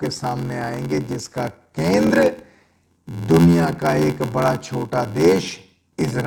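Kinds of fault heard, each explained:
Block size mismatch (padded): each block arrives shorter than the next stage reads, and zeros fill the rest, which fits a 512-sample read size. Gaps at 86.1 Hz buzz steadily, and speech slows to 0.861 speed at near-normal pitch. The waveform shows regular flat dropouts, and the spectrogram shows thin vertical stripes.
Bluetooth stutter: from 2.07 to 2.11 s, a lost or late packet makes the receiver replay its last slice of about 23 ms, a brief stutter before speech resumes further along. The waveform shows a duplicated segment, and the spectrogram a repeated block, then a jump.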